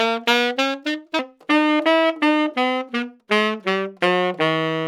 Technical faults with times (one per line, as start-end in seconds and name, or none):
0.00-1.19 section at the wrong speed